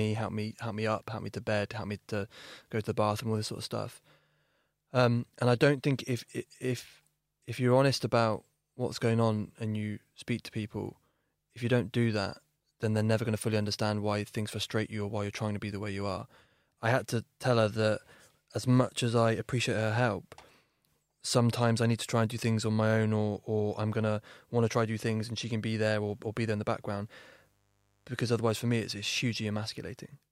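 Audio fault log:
26.02–29.27 s, mains buzz: just after "she can be there" a steady, raspy buzz comes in, sitting roughly 40 dB below the speech. Sharp switching spikes twice per 50 Hz cycle pile up harmonics reaching several kHz, which gives it that rasp.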